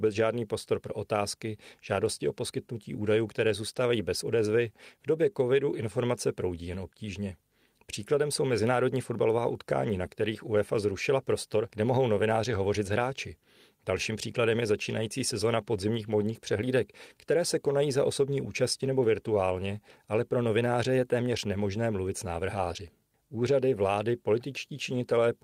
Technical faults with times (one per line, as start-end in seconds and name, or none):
10.05 lost packet rebuilt from error correction